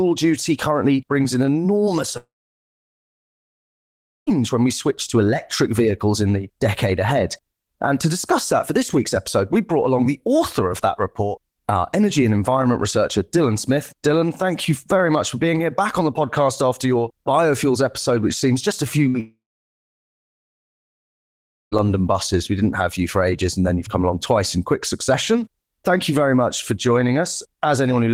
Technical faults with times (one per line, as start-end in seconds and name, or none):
2.17-4.30 long network dropout
19.09-19.17 burst of packet loss
19.20-21.75 long network dropout